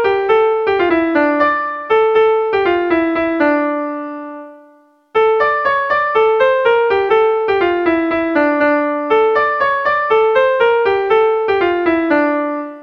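At 0.88–0.90 s and 7.08 s, damaged data in the compressed stream makes the decoder lose frame sync, producing brief disturbances heard as a chirp, squawk, click or short hole.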